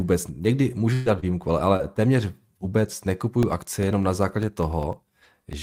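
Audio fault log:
0.93–1.08 s, burst of packet loss. About 120 ms of speech never arrived. The receiver stretched the last sound across the hole and faded it, giving a held buzz or dying hiss. Speech then resumes further on, with that stretch missing.
1.06–1.08 s, 1.22–1.24 s, 1.58–1.60 s and 1.79–1.81 s, lost packet rebuilt from error correction. Each 20 ms packet was lost, but a low-bitrate copy carried in the next packet was decoded instead. There is no gap, only a brief rougher, noisier patch.
1.20–1.24 s and 1.76–1.81 s, short concealed packet loss. About 20 ms went missing each time. The decoder continued the previous sound for roughly 26 and 30 ms, then blended back. Each is heard as a short smear or wobble, the second just before "téměř vůbec".
3.43–5.53 s, periodic USB or driver dropouts. Right after "téměř vůbec", roughly twenty tiny losses of about a millisecond each, spaced 0.1 s apart, are replaced by silence. 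They are heard as a regular ticking, ten per second, over the speech.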